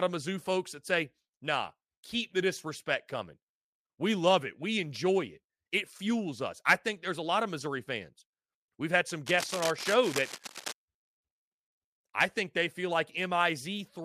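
It's a short speech recording, and the trouble starts right after "had some": from about 9.26 to 10.73 s there's a burst of cable scratch noise, a dense, uneven scratching and rustling laid over the voice, sitting only around 10 dB below it. The likely cause is a worn cable or connector being shifted, so its contact resistance jumps around rapidly and spits out those ragged noise bursts for that second and a half.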